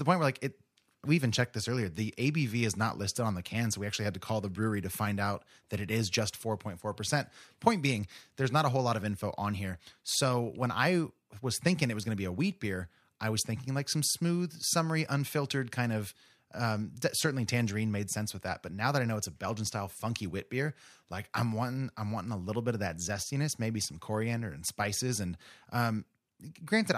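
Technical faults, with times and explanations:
No audible technical faults.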